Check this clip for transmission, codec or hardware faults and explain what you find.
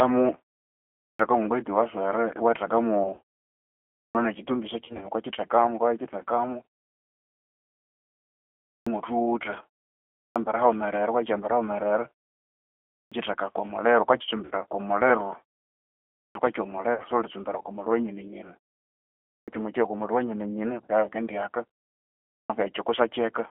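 Three kinds of fault are present: G.729 coding throughout, eight clipped starts after pauses, and four bursts of concealed packet loss.

G.729 codec (throughout): The speech has been squeezed through a low-rate model-based coder, which fits G.729A at 8 kbit/s. Each short frame is rebuilt from a vocal tract filter, a pitch estimate and a handful of pulses, so the voice sounds rough and slightly synthetic. On a spectrogram, energy sits in a telephone band from about 300 Hz to 3.4 kHz with nothing above, and the harmonics look smeared rather than crisp.

Clipped start after a pause (0.89, 3.79, 8.56, 10.0, 12.8, 16.05, 19.12 and 22.19 s): After each pause of roughly 0.4 to 2 s, the output device appears to drop into a sleep state and needs time to wake. The first 300 to 360 ms of the next phrase never comes out, so speech begins abruptly, without its opening sounds. At 19.12 s the cut falls just before "ko muliru wanyine". 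On a waveform, each phrase onset rises as a sudden wall from flat silence, with no gradual attack.

VoIP packet loss concealed by the speech codec (3.03, 4.85, 14.45 and 16.94 s): Packets went missing, and the decoder filled the gaps by extending its last pitch and filter settings at falling gain. Near 3.03 s, 100 ms is lost across a 200 ms stretch. Near 4.85 s, 100 ms is lost across 160 ms. Near 14.45 and 16.94 s, 60 ms is lost each time. Each gap sounds like a brief stretched, buzzy tone or coloured noise that fades, and the voice stays weakened for a short while afterwards. On a spectrogram, these spots show frozen, repeated frame content that dims before normal speech texture returns.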